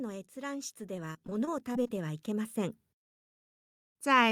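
From 0.34 s to 2.85 s the level climbs steadily by about 10 dB: this is automatic gain rising. The gain control judged the input too quiet and raised its amplification bit by bit over roughly two and a half seconds. The background noise swells along with the speech, which sets it apart from a talker simply moving closer to the microphone, where the voice would grow but the room sound would stay put.

Inside that rise, from 1.13 s to 1.99 s, comes repeated packet loss with a robotic sound. Eight separate holes open in the stream, none longer than 22 ms, adding up to 140 ms of missing audio. Of that, 118 ms is patched by stretching the preceding sound forward, so about 14% of the stretch is synthetic fill. The result is choppy and robotic rather than a single dropout, because the short gaps keep recurring in quick succession instead of leaving one clean silence.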